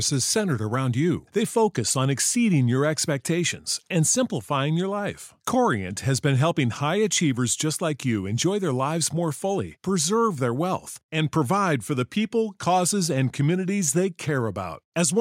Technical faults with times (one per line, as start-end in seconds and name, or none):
none